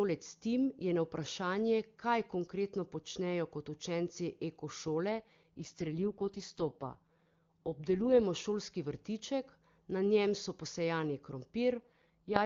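From 5.11 to 8.21 s, just before "šolski vrtiček na njem", the speech turns rough, buzzy and synthetic, and it degrades the same way again from 11.78 s, after "na njem so posejani", to the end. This is an AMR rate drop: the link forced the AMR-WB coder down from its clear top rate to its raspy bottom mode, which fits a fall from 23.85 to 6.6 kbit/s. Unlike packet loss or narrowband fallback, there is no gap and the bandwidth stays full. Only the texture degrades.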